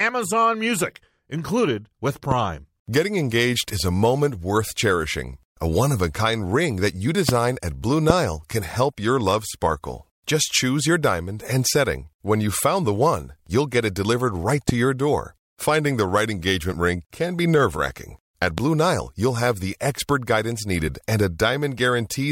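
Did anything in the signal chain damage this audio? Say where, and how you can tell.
Yes. Loud pops at 2.31, 7.29, 8.10, 14.69 (after "delivered right") and 18.58 s: single 22 ms transients about 15 to 20 dB above the speech, which continues underneath. These are likely voltage steps in the analogue wiring, from a plug, switch or static.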